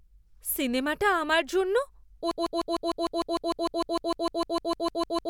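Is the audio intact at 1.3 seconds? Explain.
Yes, the speech at 1.3 seconds is intact, with no dropout, click, distortion or other fault at that point.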